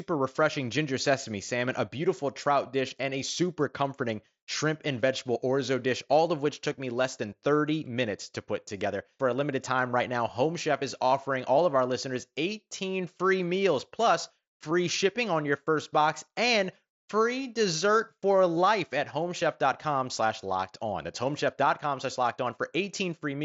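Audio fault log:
No faults appear anywhere in this speech clip. The Bluetooth mSBC headset codec path is audible as a wideband band limit near 8 kHz, with only light codec texture on the louder passages.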